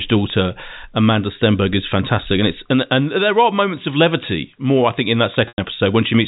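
At 5.48 s, just after "more I think in", about 100 ms of audio is lost in a packet loss with pitch repetition, which fits five 20 ms packets. The receiver bridges the gap by repeating the last pitch period, so the sound briefly holds on a buzzy tone and then fades toward silence until 5.58 s, when the speech cross-fades back. On a waveform the gap appears as identical repeating cycles shrinking in amplitude. On a spectrogram it shows as frozen harmonic lines, capped at 4 kHz by the G.711 telephone band.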